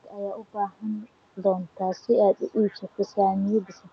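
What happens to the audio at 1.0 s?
Nothing goes wrong at 1.0 s: the speech passes through intact, with only the steady band-limited character of the call path's codec audible there.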